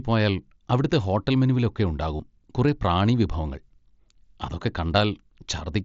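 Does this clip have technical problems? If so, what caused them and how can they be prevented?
Yes. Concealed Bluetooth headset packet loss appears from 2.17 to 2.20 s, between "അവിടുത്തെ ഹോട്ടൽ മെനുവിലൊക്കെ" and "കുറേ പ്രാണി വിഭവങ്ങൾ". About 22.5 ms of audio never arrived, which fits roughly three lost headset packets. The phone filled the gap by repeating the best-matching stretch of the preceding audio. That gives a brief buzzy, held tone at full level and a small warble where real speech resumes. The wideband mSBC link caps the sound at 8 kHz. Keeping the headset close to the phone, with no body or obstacles between them and less 2.4 GHz interference nearby, prevents this.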